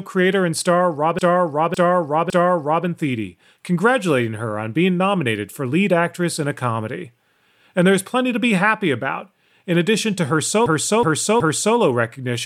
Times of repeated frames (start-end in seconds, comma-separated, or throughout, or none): 1.19-2.86, 10.66-11.77